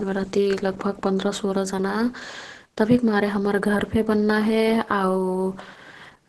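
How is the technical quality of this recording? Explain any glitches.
Quality is poor throughout: the speech sounds muffled, hoarse and grainy, with nothing above 12.1 kHz. This is likely heavy Opus compression in its hybrid speech mode, fitting a low rate near 12 kbps, which fills bands with noise rather than leaving the swirling gaps typical of MP3.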